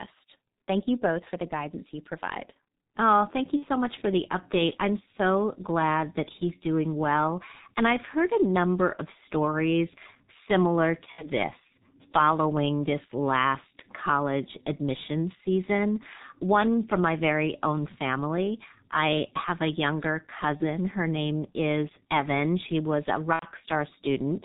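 The whole clip runs through the G.723.1 codec, and it sounds like a low rate around 6.3 kbit/s. Nothing comes through above 4 kHz, so the speech is muffled and hoarse, consonants smear, and the slow-updating voice model leaves heavy, grainy damage throughout.

On top of that there are four spots of VoIP packet loss concealed by the speech codec: 3.56–3.65 s, 11.12–11.25 s, 20.57–20.64 s and 23.33–23.46 s. The decoder fills each gap by stretching its last pitch and filter into a fading buzzy tone or coloured noise. The gaps sound like roughly 30 to 90 ms of missing audio, and the 23.33 s one is the longest.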